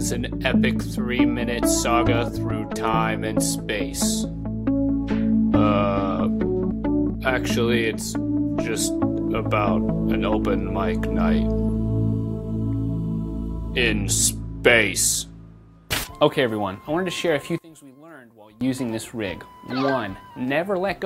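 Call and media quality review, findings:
17.58–18.61 s: level collapses by about 22 dB, centre content nearly gone, residue left. Likely one channel inverted, mono sum cancelling common signal. Spectrogram: sudden broadband dropout.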